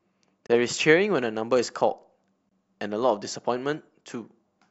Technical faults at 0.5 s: gap between stream segments

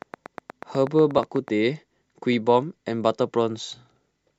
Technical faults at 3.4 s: none

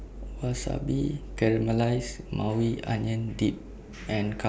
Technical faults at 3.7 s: none

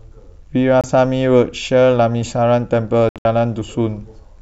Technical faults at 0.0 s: none

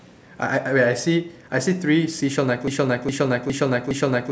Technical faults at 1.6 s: none

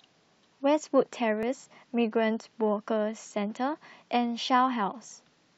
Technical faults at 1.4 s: overlap between stream segments

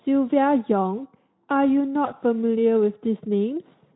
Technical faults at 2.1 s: VoIP packet loss concealed by the speech codec

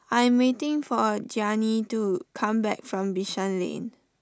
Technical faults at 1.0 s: none

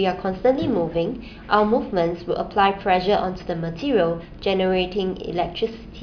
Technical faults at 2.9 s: none

